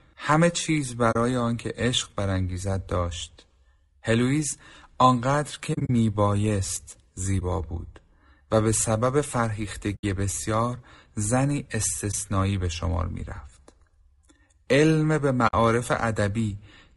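Speech heard throughout through what is likely low-delay AAC compression (AAC-ELD), whose short frames resolve the voice's pitch harmonics poorly and leave too few bits at a rate that fits about 32 kbps. The damage is plainly audible: the voice is rough and grainy, with noise filling the gaps between harmonics and a top band that sounds thinned or synthetic. On top of this, AAC frame loss with muting occurs six times, where the decoder zeroed the missing frames' spectrum and the overlapping windows faded the sound out and back in, leaving brief dips or soft-edged holes. The gaps fall at 1.11 to 1.16 s (40 ms), 5.73 to 5.90 s (about 100 ms missing, scattered over 160 ms in runs of around 40 ms at most), 7.39 to 7.42 s (20 ms), 9.95 to 10.04 s (80 ms), 12.11 to 12.15 s (20 ms) and 15.47 to 15.54 s (60 ms). These lengths fit losses of one to five 20 ms frames.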